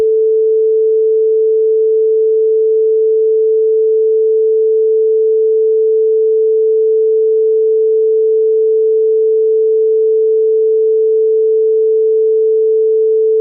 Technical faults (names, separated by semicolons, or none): skip ahead